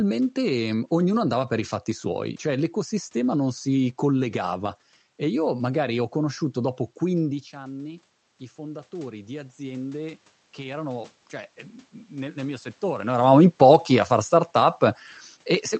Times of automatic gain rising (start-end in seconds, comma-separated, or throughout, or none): 7.51-11.17